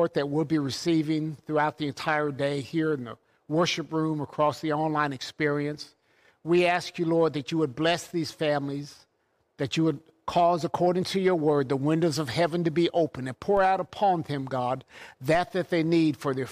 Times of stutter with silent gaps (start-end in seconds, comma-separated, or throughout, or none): none